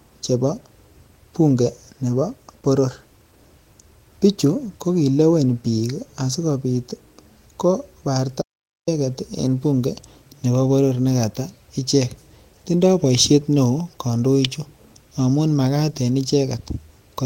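At 8.42 s the speech drops out to dead silence for about 455 ms, room tone and all, before returning on "en bunge nebo boror". That's an audio dropout to silence, likely a lost input with silence written through the gap.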